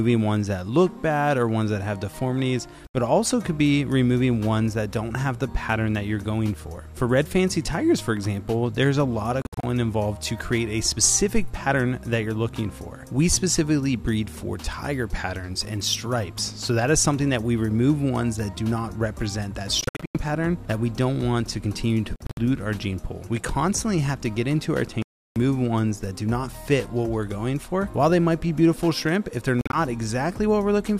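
Silent gaps with abrupt edges cut in at 2.87, 9.42, 19.81, 22.16, 25.02 and 29.61 s. The sound resumes further on, as if it kept playing. This is likely a Bluetooth dropout, from packets that never reached the headphones.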